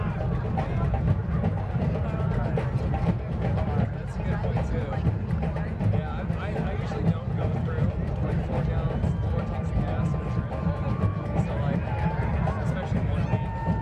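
No technical faults can be heard anywhere in the audio. Nothing in it calls for a timed note.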